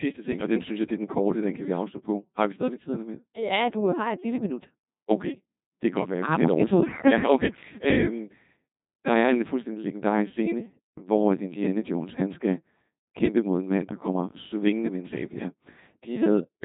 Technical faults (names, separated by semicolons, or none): Codec 2 vocoder